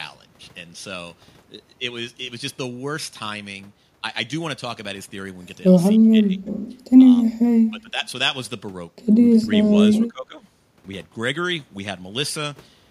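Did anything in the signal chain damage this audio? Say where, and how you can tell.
Yes. The damage sits in call processing: the speech drops away three times, from 5.97 to 6.51 s, 7.71 to 8.01 s and 9.99 to 10.42 s, sinking by around 15 dB at worst in the first and last, and about 10 dB in the middle one, each lasting roughly half a second or less. That's likely speech suppressed in double talk, where the echo canceller couldn't separate this talker from loudspeaker echo and ducked both together.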